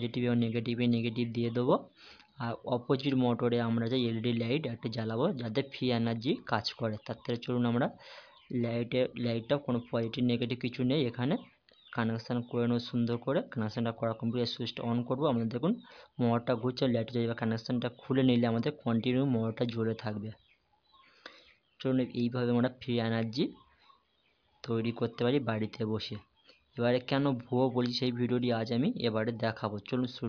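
Nothing in the recording stands out as a technical problem, so there's nothing to flag here.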